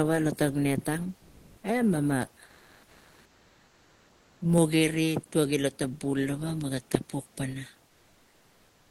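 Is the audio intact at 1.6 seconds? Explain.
No. After "lo net ang", from 1.17 to 1.63 s, the room's natural background is replaced by comfort noise. It is steady and featureless, and its level shifts by only about 1 dB. The sender likely stopped transmitting during the pause, pointing to Opus discontinuous transmission, and the receiver synthesized this filler.

From 1.60 to 1.63 s, the onset is clipped by the voice detector. The first 30 ms of the returning speech are missing, so it starts abruptly. The detector was likely slow to register that sound had resumed.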